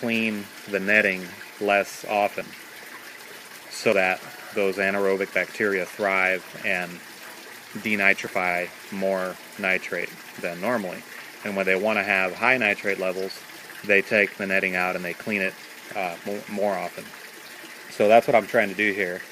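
At 3.92 s and again at 8.27 s the audio jumps forward: roughly 70 ms goes missing at the first point and about 20 ms at the second. These are likely dropped buffers from an overrun, where incoming samples were overwritten before being read and the surrounding audio was spliced together. Unlike a dropout, no silent gap opens up; the sound simply skips ahead.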